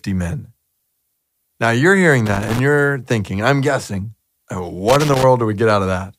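A worn or dirty contact making and breaking in the signal path causes loose connector crackle in this speech recording, chopping the signal into irregular scratchy bursts. It strikes from 2.26 to 2.59 s, after "you're hearing" and before "you're thinking I'm guessing", and again from 4.88 to 5.24 s, just after "thinking I'm guessing uh".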